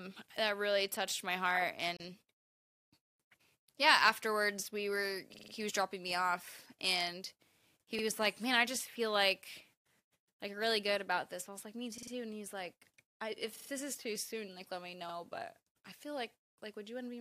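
Separately encoded pieces of this speech were joined untrimmed, leaving a gap at a join of encoded pieces: a 33 ms gap from 1.97 to 2.00 s before the speech resumes.

Playback then starves and the device replays its last buffer. Each repeated buffer is a 46 ms chunk, which fits a 2048-sample buffer, heard as a stutter at 5.34 to 5.53 s (four extra plays), 7.99 to 8.03 s, 11.98 to 12.12 s, 13.56 to 13.70 s, and 15.09 to 15.14 s.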